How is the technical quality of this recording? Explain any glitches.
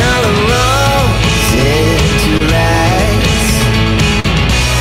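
The recording has two brief glitches, both short concealed packet loss. At 2.37 to 2.42 s about 20 ms of audio went missing, and at 4.20 to 4.26 s about 40 ms. In each gap the receiver extended the preceding sound, pitched or noise-like, then crossfaded back into real audio. The result is a quick smear or wobble rather than silence or a sharp click, which is what sets it apart from a plain dropout.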